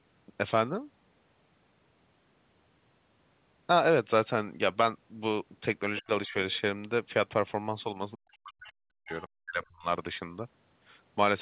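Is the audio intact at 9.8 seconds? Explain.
No. From 9.45 to 9.86 s the speech sinks by about 40 dB, likely speech suppressed in double talk: the echo canceller mistook overlapping talk for echo. The voice dips and loses its high end or cuts out in pieces.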